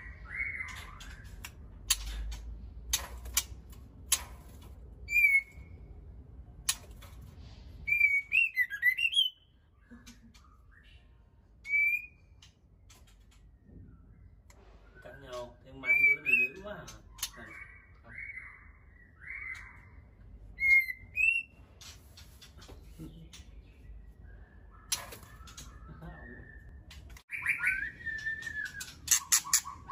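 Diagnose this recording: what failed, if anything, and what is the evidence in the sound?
A dropped buffer (overrun) at 26.69 s, at the driver or buffer stage. The sound jumps abruptly, and roughly 40 ms of material is missing, with no gap of silence in its place. The audio on either side is spliced directly together. The likely cause is the capture software failing to read its buffer before the hardware wrote over it, so that block was lost and the stream skipped ahead.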